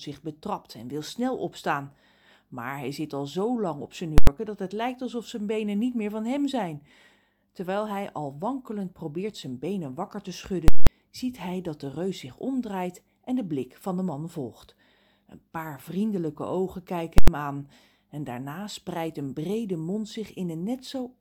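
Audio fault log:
4.18–4.27 s, 10.68–10.87 s, 17.18–17.28 s: invalid numbers at full scale. A calculation produced infinite or invalid values, which were pinned at one extreme for whole blocks of 93, 186 and 93 ms (fitting 4096-, 8192- and 4096-sample blocks). The output sits flat far beyond the speech's peaks, heard as a very loud pop at each edge with nothing between, or as a single bang. The three blocks fall after "zo lang op zijn", "zijn benen wakker te" and "paar vriendelijke ogen kijken".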